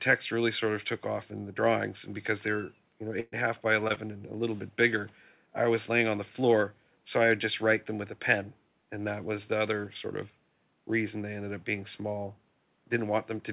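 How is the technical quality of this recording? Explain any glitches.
The recording has three dropouts close together, all within the first four seconds. The sound is band-limited with nothing above 4 kHz, which fits a G.711 A-law call path at 64 kbps, and the room noise sits about 44 dB below the speech.

From 3.20 to 3.34 s, right after "because they're you know", there is a burst of packet loss. The last sound is stretched and fades, and then the audio resumes at "a half by". About 120 ms of audio never arrived in time, and the receiver filled nearly all of it by extending and attenuating what came before.

Between "a half by" and "and a little bit", there are two short concealed packet losses, at 3.88 to 3.92 s and 3.94 to 3.98 s. Each is a quick smear or wobble. About 20 ms was missing each time, and the decoder patched the gap by continuing the preceding sound before blending back into the real audio.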